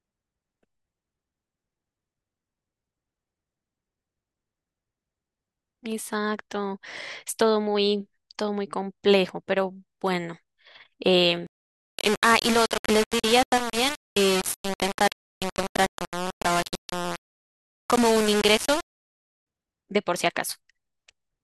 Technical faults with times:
11.47-19.47 low bit depth without dither

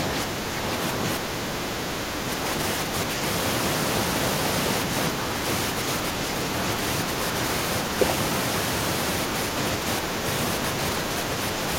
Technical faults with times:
0.26-0.65 speech suppressed in double talk
1.19-2.44 speech suppressed in double talk
2.85-3.21 speech suppressed in double talk

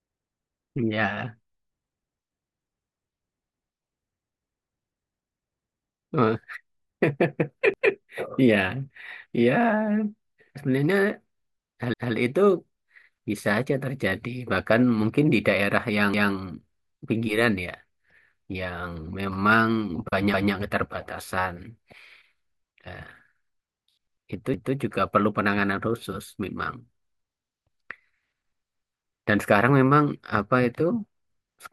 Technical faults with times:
3.54-3.74 overlapping chunks
7.74-7.94 overlapping chunks
11.94-12.14 overlapping chunks
16.14-16.34 overlapping chunks
20.34-20.54 overlapping chunks
24.54-24.74 overlapping chunks

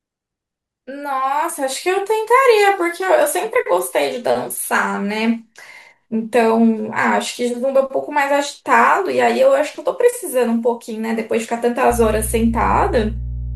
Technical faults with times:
11.90-13.55 mains hum

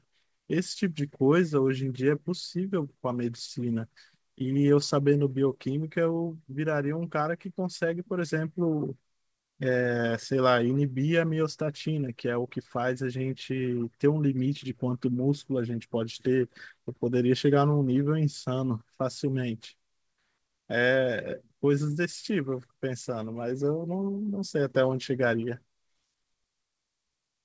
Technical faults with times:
none

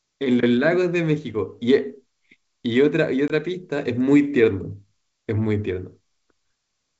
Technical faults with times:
3.28-3.32 packet loss on an ADPCM call

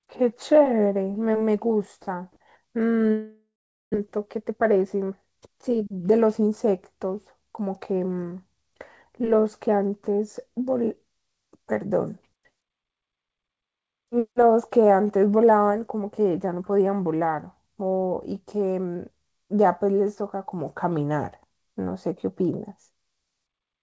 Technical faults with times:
3.12-3.96 long network dropout
4.18-6.12 jitter buffer speed-up

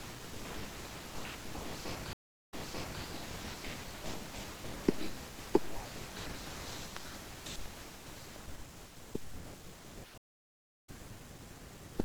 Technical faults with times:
2.13-3.02 stream reconnect
10.18-10.89 stream reconnect

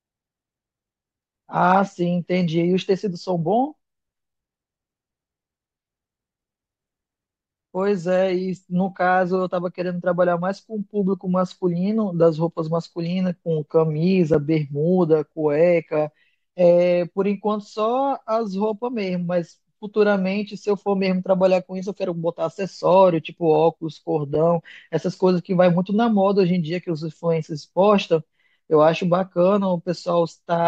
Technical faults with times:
14.34 gap between chunks
24.35 gap between chunks

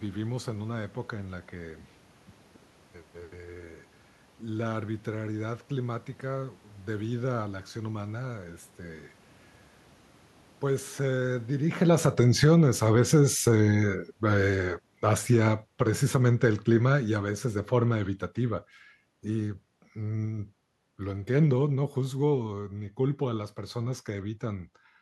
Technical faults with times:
11.49-18.69 automatic gain falling
12.55-13.56 automatic gain rising

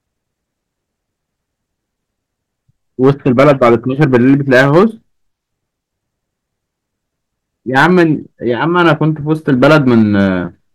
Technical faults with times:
3.03-4.84 hard clipping
7.76-8.03 hard clipping
8.51-8.92 hard clipping
9.32-10.29 hard clipping

